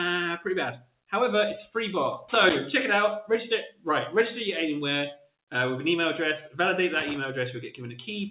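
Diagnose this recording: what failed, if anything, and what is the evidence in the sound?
Call processing: a speech noise suppressor stays on throughout, treating sustained sound and tails as noise. Level pumps by roughly 5 dB, unlike the steady 4 kHz ceiling of the G.711 link.

Noise suppressor cuts appear at 0.77–1.12 s (about 18 dB down), 3.70–3.86 s (about 14 dB) and 5.16–5.34 s (about 17 dB). Onsets survive while sustains sink, unlike a dropout, which silences everything.

Analogue wiring: loose connector crackle at 2.28–2.56 s and 6.94–7.16 s is an irregular, scratchy burst from a contact making and breaking. Buffer glitches instead give evenly spaced clicks.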